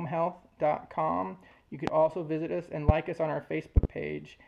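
Loud pops at 1.87 to 1.91 s and 2.89 to 2.92 s, then a double pop at 3.77 to 3.87 s, each roughly twenty decibels above the sound, likely from a voltage pulse such as static or a switch. Unlike dropout clicks, the sound continues unbroken beneath them.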